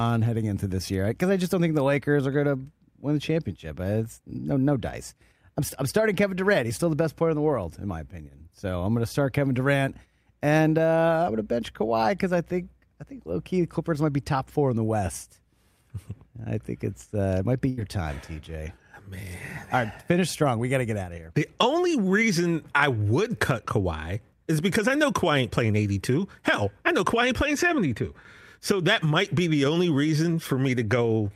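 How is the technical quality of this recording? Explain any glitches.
The speech has one audible glitch. At 17.69 to 17.79 s there is a burst of packet loss: 78 ms of fading, stretched sound replaces 80 ms of lost speech, visible as smeared, decaying spectrogram bands.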